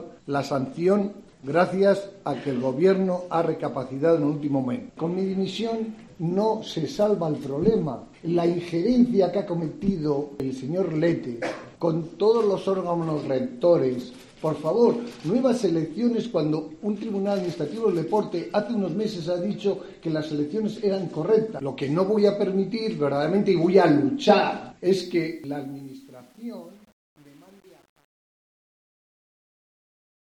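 A gain stage applying the fade-out keeps too few bits and adds no dither, which points to a word length of around 9 bits. From 24.86 s to the end at 30.32 s this causes truncation distortion on a fade. The fade is already affected from about 25 s, and from 25.38 s onward the waveform collapses into coarse square steps. The tail turns gritty instead of thinning away cleanly.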